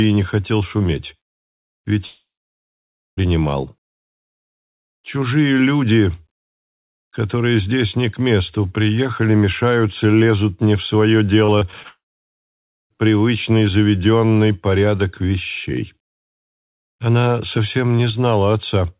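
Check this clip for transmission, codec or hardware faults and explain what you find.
Three transmission faults are audible, clustered in two places, over a call path whose output stops at 4 kHz, which fits a narrowband telephone codec such as G.711.

Long network dropout, 2.06 to 3.19 s and 11.88 to 12.92 s. The cause is likely a stall in packet delivery lasting about 1.1 s and 1.0 s respectively. The receiver briefly extends the last sound as a fading buzz, then leaves roughly 0.9 s of silence in each case before the audio resumes with that stretch gone.

Repeated packet loss (robotic sound), 11.45 to 11.86 s. Five short holes, the longest 30 ms, removed about 100 ms in total. Each was patched by stretching the preceding sound, so nearly a quarter of this span is concealment. The result is choppy, with pieces missing, and it runs straight into the second dropout.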